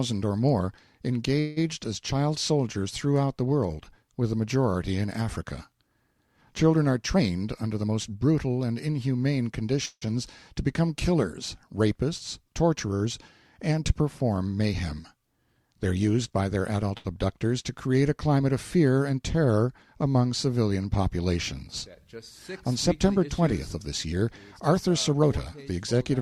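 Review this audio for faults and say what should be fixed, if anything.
Call audio freeze, at 1.39–1.59 s and 9.85–10.07 s: packets were likely held up in transit and the jitter buffer emptied. The receiver extended the last sound as a fading buzz or hiss for 172 ms, and then for 161 ms including about 60 ms of silence. The sound resumed where it stopped, later by that amount.

Jitter buffer speed-up, at 7.15–8.33 s (114% speed, around 150 ms removed), 16.3–16.91 s (110%, around 70 ms) and 25.13–26.18 s (109%, around 100 ms): the buffer had built up excess delay. The receiver repeatedly cut pitch-period slices, so the sound runs hurried at unchanged pitch.

Short stall from a late packet, at 16.98–17.06 s: one packet missed its playout time. The receiver stretched the preceding sound by 69 ms, holding it too long with a slight buzz or dip, and then continued with nothing lost.

To prevent these, fix the network path's delay variation and set a jitter buffer target that absorbs bursts without later needing aggressive catch-up compression.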